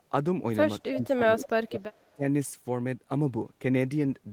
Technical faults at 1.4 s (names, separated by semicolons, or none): speech suppressed in double talk; echo leak